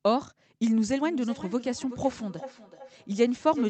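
From 1.04 s to the end, the speech starts coming back at itself: each stretch of sound returns roughly every 0.4 s, thinner and more ringing with each pass, with the repeats peaking at about 15 dB below the direct speech. This is feedback echo between two devices. A second device in the same room plays this stream aloud, the first microphone picks it up again, and neither echo canceller removes sound played by the other device, so the loop keeps recirculating.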